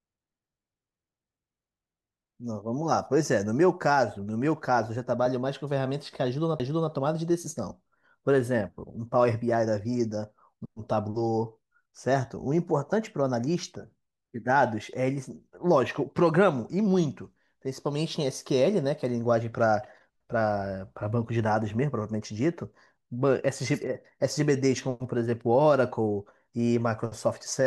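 A CD skip at 6.59 s: a knock or disc flaw threw the laser onto another spiral turn, so the speech ticks through a momentary mute and resumes elsewhere.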